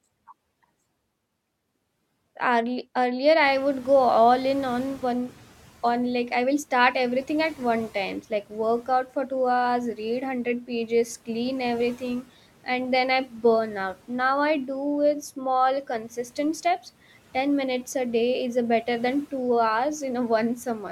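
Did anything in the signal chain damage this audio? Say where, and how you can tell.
Yes. Call processing shows the noise suppressor catching up. Near 3.5 s the room noise rises by about 19 dB. From 3.42 to 5.52 s it comes through with little reduction, then sinks by about 8 dB as the estimate adapts over 2.1 s. A spectrogram shows the broadband floor stepping up, then fading gradually.

The same stage also produces speech cut by the noise suppressor, at 15.36–15.45 s and 15.84–16.38 s. There the suppressor mistook quiet speech for noise, pulling it down by about 8 dB and about 10 dB so it sounds swallowed. The waveform shows brief envelope dips, and the spectrogram shows faint components thinned along with the background.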